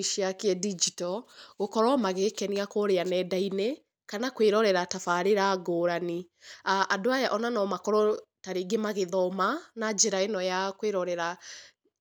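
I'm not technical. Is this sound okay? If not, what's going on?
Yes, nothing in this speech recording stood out as a problem when listening to it.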